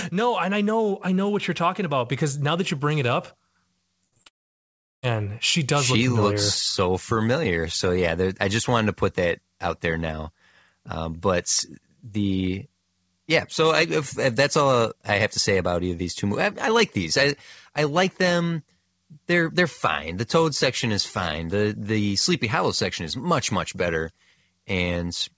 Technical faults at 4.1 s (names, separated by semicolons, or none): repeated packet loss (robotic sound)